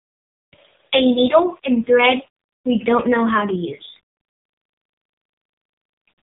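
From start to finish the speech carries a grainy, signal-following roughness that thickens on quiet syllables and sputters at phrase tails, with the error sitting roughly 40 dB under the signal. That points to low bit depth without dither, likely 8-bit rounding. Unlike steady hiss, it vanishes in silence and moves with the sound.

Throughout, the AMR narrowband mobile codec is also heard: nothing passes above 3.8 kHz, and heavy coding damage makes the voice buzzy and synthetic. This fits a low AMR-NB rate near 6 kbps. A plain low-pass filter would only dull the sound, without this vocoder-like buzz.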